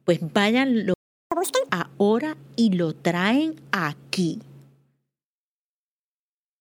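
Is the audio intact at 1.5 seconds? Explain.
No. A catch-up at higher speed runs from 1.32 to 1.69 s. After a stall, the player resamples its backlog at double speed to regain lost time, so the speech rushes and jumps up in pitch by roughly ten semitones before settling back just ahead of "ahora y".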